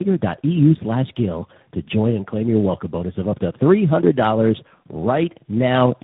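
Throughout, tandem speech coding through three chained speech coders leaves the speech rough, muffled and warbly. The spectrogram shows nothing above 3.8 kHz and smeared harmonics.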